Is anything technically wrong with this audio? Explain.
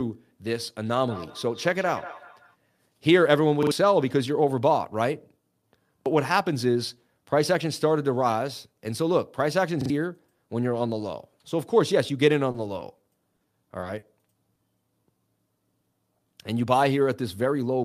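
Yes. From 0.86 to 2.57 s there is feedback echo between two devices: the speech returns roughly every 200 ms, peaking at about -17 dB relative to the direct sound. Two devices on the same call share a room, so one device's microphone picks up the other's loudspeaker. Each device's echo canceller removes only its own playback, so the sound circulates. Each pass comes back thinner and more ringing than the last.

A repeated buffer occurs at 3.63 to 3.71 s, 6.02 to 6.06 s and 9.81 to 9.90 s. When fresh audio was late, the device replayed its last block of about 43 ms, which fits a 2048-sample buffer. The block plays twice extra at 3.63 and 9.81 s and once extra at 6.02 s. Each repeat has a hard join and is heard as a short stutter. About 100 ms of audio is lost at the first and third points and about 40 ms at the second.

Short stalls from a late packet occur at 12.51 to 12.57 s and 13.80 to 13.85 s. 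The jitter buffer ran dry, so the receiver held the last sound for 30 ms and then 20 ms until the packet arrived, then resumed where it had stopped. Nothing is skipped, but the sound is drawn out with a faint buzz or dip, and the timing slips slightly.

Short concealed packet loss occurs at 13.36 to 13.43 s, 13.98 to 14.05 s and 14.54 to 14.61 s. In each, 40 ms of audio never reached the decoder. The receiver extrapolated from the preceding sound, continuing its pitch where it was voiced and using shaped noise where it was not, then crossfaded back into real audio. Each gap is heard as a brief smear or wobble, and a short consonant can disappear.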